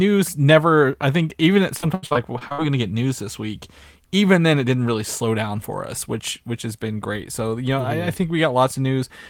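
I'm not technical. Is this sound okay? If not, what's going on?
No. After "I think even at", from 1.77 to 2.6 s, the voice turns choppy and robotic. That's repeated packet loss: eight quick dropouts, each patched by stretching the sound before it.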